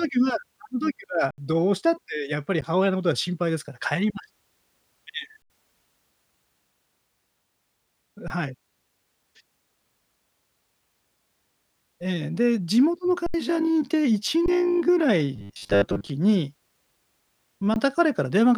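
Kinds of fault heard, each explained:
Underrun with held sample: the output buffer ran dry and the converter froze on its last value until fresh data arrived, so the speech drops into a flat, held level, then resumes after live audio was lost during the wait. This happens at 1.31–1.38 s, 2.61 s, 5.42–5.50 s, 8.28–8.30 s, 13.26–13.34 s, 14.46–14.48 s and 17.74–17.76 s. The three longer gaps each swallow around 70 ms of speech.
Robotic sound from repeated short buffers: from 15.36 to 16.08 s the speech turns into a rigid, metallic buzz fixed at 100 Hz that still loosely tracks the syllables. The likely cause is new audio arriving too rarely, so the playback side kept looping the last 10 ms chunk, one cycle of that 100 Hz, in place of real audio. Most of the stretch is repetition, with the skipped speech discarded.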